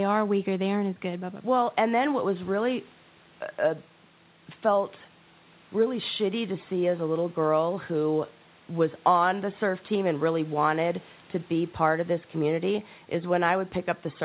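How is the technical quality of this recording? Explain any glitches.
No glitches can be heard anywhere in this speech.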